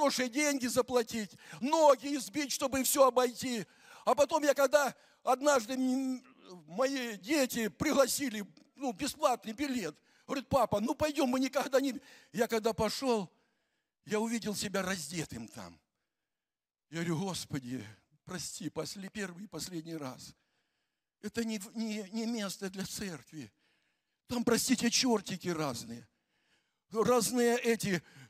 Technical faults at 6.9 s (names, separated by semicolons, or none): dropped samples